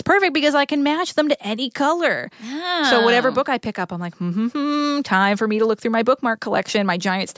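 No technical faults can be heard anywhere in the speech recording, and the signal stays steady and intact throughout.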